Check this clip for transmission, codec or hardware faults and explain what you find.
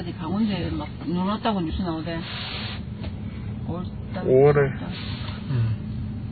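Heavy MP3 compression damage runs throughout: the sound is watery and swirling, with nothing above 4.5 kHz. The likely cause is a starved encoder, consistent with roughly 16 kbps, that cuts the treble at a fixed point and drops weak frequency components that flicker frame to frame.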